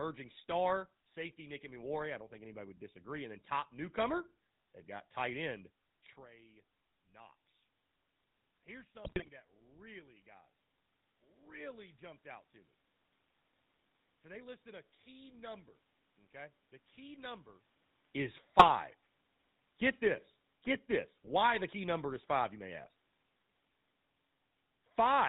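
The whole clip is carried by the GSM full-rate codec. It rebuilds the speech from a vocal-tract model fed by evenly spaced pulses, and only one excitation sample in three survives. The sound fits a 13 kbps GSM link. Nothing reaches above 4 kHz, so the top end is gone. The voice has a plainly audible buzzy, gravelly grain.

GSM bit errors break in twice. The first runs from 9.04 to 9.29 s. The second is shorter, from 18.58 to 18.72 s. On both stretches corrupted bits reached the decoder. Wrong filter, pitch and gain values twist the spectrum and throw the level around frame by frame. The first burst is the heavier one, with squawks, pops and gargling. The second is a brief garbled blip. The level shifts near 6 s and 17.5 s come from the talker moving.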